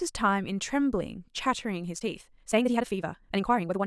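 A time-stretched section runs from 1.89 s to the end at 3.86 s, where the speech suddenly moves at twice its earlier pace yet keeps its pitch, sounding rushed. Software likely squeezed this stretch to fit a length by dropping short pieces.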